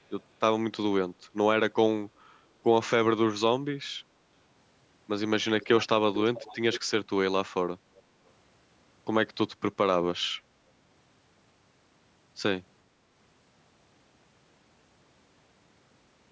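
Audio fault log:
5.61 to 5.87 s, 6.14 to 6.81 s and 7.96 to 8.02 s, echo leak: a loudspeaker-side echo canceller likely let its microphone pickup through, so a copy of the speech returns about 440 ms late, roughly 10 to 35 dB below it, loudest at 6.14 s and quietest at 7.96 s.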